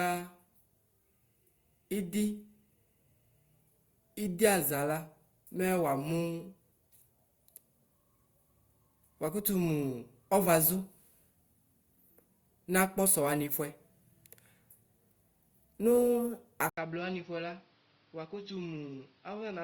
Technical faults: input switched to a poorer device

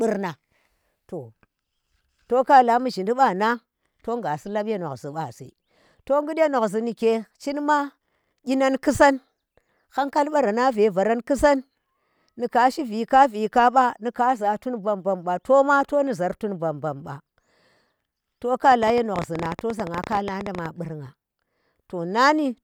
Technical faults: train of clicks

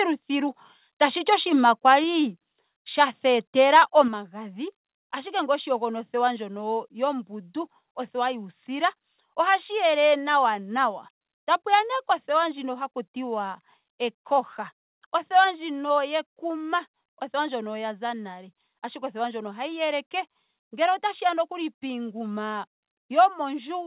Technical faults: microphone overload; microphone volume stepped down

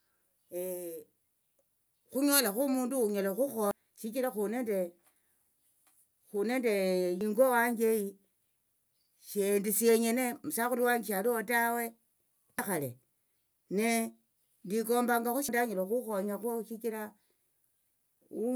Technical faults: damaged data in a compressed stream

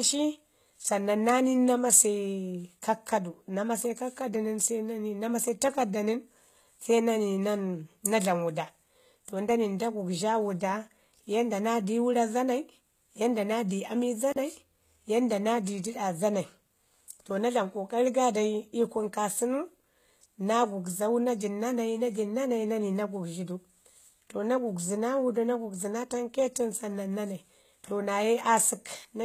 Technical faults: HE-AAC compression; intermittent contact

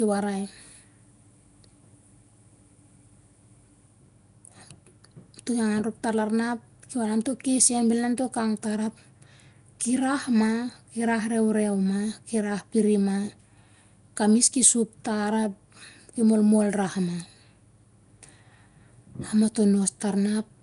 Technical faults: Nellymoser compression

